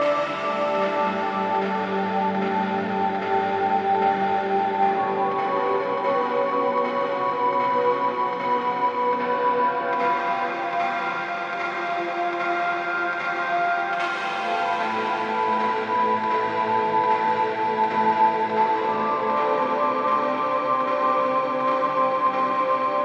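Short skips, each a small jump forward in the audio, occur at 4.95–4.97, 5.92–5.96, 7.36–7.40, 15.68, 18.18–18.21, 20.04–20.06 and 21.85–21.88 s. These are compressed frames skipped. At each point whole frames were never played, so roughly 50 to 200 ms of audio vanishes. The jumps come in steps that fit a frame length of about 46 ms.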